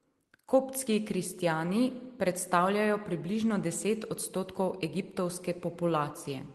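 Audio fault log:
No faults heard anywhere in this speech recording.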